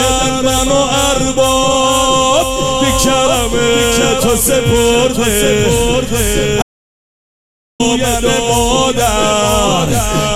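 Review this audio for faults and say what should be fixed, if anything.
There is an audio dropout to silence from 6.62 s to 7.80 s. The sound cuts off abruptly and returns just as suddenly. The gap is silent, with no background or room tone underneath. About 1.17 s of material is gone. The likely cause is a brief loss of the input signal, such as a loose connection or link failure, while the recorder kept writing silence. To prevent it, secure cables and connections and monitor the input during recording.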